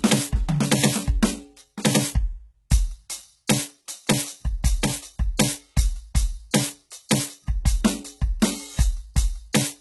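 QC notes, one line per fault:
Throughout: HE-AAC compression. The music is heavily damaged, with nothing above about 11.8 kHz. The treble is rebuilt from copied lower bands rather than coded, so its harmonics no longer line up with the fundamentals and cymbal-like content sounds gritty and metallic. The degree of damage points to a very low bitrate, around 16 kbps, likely HE-AAC v2. A spectrogram would show a hard ceiling at 11.8 kHz and repeated, blocky patches of upper-band texture.
6.51 to 6.54 s and 7.09 s: pre-echo. Two sharp attacks are each preceded by a short burst of hiss, spread over 28 ms before the first and 17 ms before the second. The codec spread noise meant for each loud onset across its whole transform block, so the noise fills the quiet moment before the hit and the attacks sound soft and smeared. On a waveform, a low noise skirt rises just ahead of each transient. On a spectrogram, a broadband smudge leads each onset.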